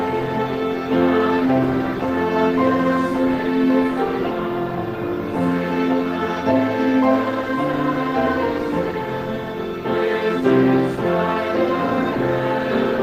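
No technical faults can be heard anywhere in the audio; the signal stays steady and intact throughout.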